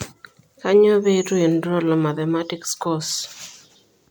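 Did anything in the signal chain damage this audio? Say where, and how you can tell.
Yes, at the codec stage. Throughout, the speech sounds swirly, hollow and smeared, with blurred attacks. That is generation loss, likely from about seven MP3 re-encodes.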